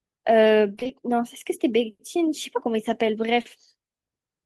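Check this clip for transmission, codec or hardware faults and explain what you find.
Two transmission faults are audible in this speech clip, both caused by audio data failing to reach the decoder in time.

From 0.75 to 0.91 s there is repeated packet loss, giving a robotic sound. Several short gaps, none longer than about 20 ms, were patched by extending the preceding sound, so about half of that 0.16 s stretch is fill. The speech turns choppy, with fragments missing.

From 3.41 to 3.47 s there is short concealed packet loss. About 40 ms never arrived, and the receiver bridged the hole by continuing the last sound before blending back into the real signal. It comes across as a brief smear or wobble.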